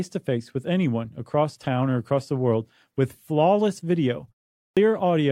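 At 4.65 s, after "world with flawless video" and a 0.4 s pause, a clipped start after a pause loses 117 ms while the output wakes, so the waveform leaps abruptly from flat silence.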